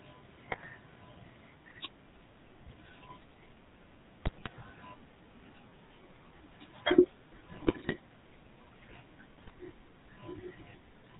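Throughout, the GSM full-rate codec gives the speech a buzzy, gravelly roughness with nothing above 4 kHz. That pulse-driven grit fits a 13 kbps full-rate coder, not the watery smearing of newer codecs.

GSM bit errors strike at 0.5–0.69 s, 4.22–4.49 s, 7.52–7.96 s and 9.36–9.51 s. Corrupted filter, pitch and gain values cause squawks, pops and gargling rather than silent dropouts.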